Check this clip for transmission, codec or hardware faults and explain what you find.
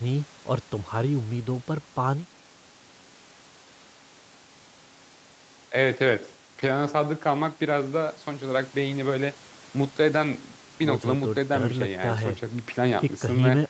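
Nothing stood out on listening to this speech, which carries the normal character of an Opus call path with its content ending around 8 kHz.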